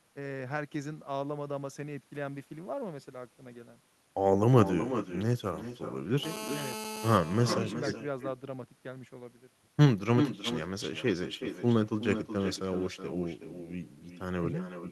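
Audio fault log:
Throughout: echo with no canceller. Every phrase is followed around 0.4 s later by a quieter, thinner copy, about 10 dB below the speech. The far end's loudspeaker feeds its microphone, and with no echo canceller the sound returns after the network round trip.
6.23–7.18 s: GSM phone buzz. A hard, raspy 217 Hz buzz rich in harmonics sits about 11 dB below the speech and stays steady for its duration. A nearby 2G handset in a call transmits in 217 Hz bursts, and the audio circuitry rectifies the pulses.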